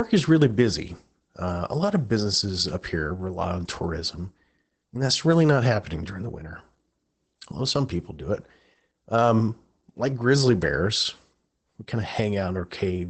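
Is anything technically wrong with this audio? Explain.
Yes. The speech carries Opus voice compression for the full length of the clip. The audio sits at a low rate, about 12 kbps, which fits a wideband setup using the SILK linear-prediction coder on 20 ms frames. Nothing is heard above roughly 8 kHz, so sibilants and breath lose their air. SILK models the voice and codes its excitation coarsely. The damage is plainly audible. The speech sounds muffled and hoarse, with a slightly robotic edge.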